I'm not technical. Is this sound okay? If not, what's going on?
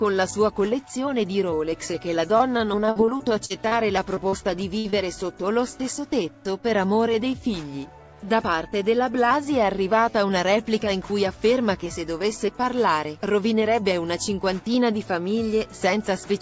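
No. Repeated packet loss (robotic sound) runs from 2.38 to 3.73 s: eight small pieces went missing, each patched by stretching the previous sound, so it turns choppy and robotic. Short concealed packet loss hits at 4.15 to 4.18 s, 4.29 to 4.34 s and 4.90 to 4.94 s, where tiny missing bits were smoothed over, leaving brief smears or wobbles. A burst of packet loss at 4.78 to 4.86 s drops about 60 ms; the last sound is held and fades before the audio jumps ahead. All of this came through a call connection (G.722) that carries nothing above 8 kHz, so the sound also lacks its top end.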